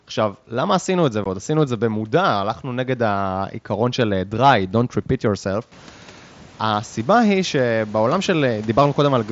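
At 1.24 s the speech drops out for 15 ms. This is an unconcealed Bluetooth headset packet loss: the gap, which fits about two lost headset packets, is left as a hole instead of patched. Its edges are abrupt, whereas concealment would smear or repeat sound across it.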